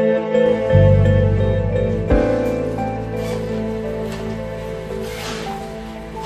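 At 3.36 s a steady whine at 1 kHz appears and continues to the end of the clip. This is USB whine: current drawn by the bus in 1 ms frames is modulated onto the power or ground and leaks into the audio path, so the interference sits at the frame rate of 1 kHz. It is a fixed, thin tone, strongest at its 1 kHz fundamental, about 30 dB below the wanted sound.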